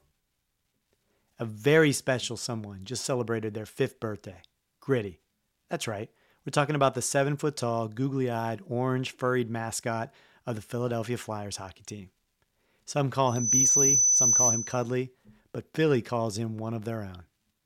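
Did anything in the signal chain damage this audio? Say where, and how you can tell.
Yes. From 13.27 to 14.93 s there is loudspeaker feedback squeal, originating in the acoustic and analogue loop between a microphone and the loudspeaker it feeds. A single steady tone at 6 kHz swells over roughly a third of a second until it sits around 10 dB above the speech. At that frequency the loop gain exceeded unity, so each pass through speaker and microphone reinforced the tone.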